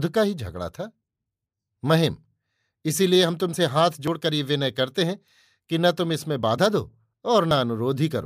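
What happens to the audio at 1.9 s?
At 1.9 s the speech runs on cleanly, with no dropout, click, distortion or other fault at that moment.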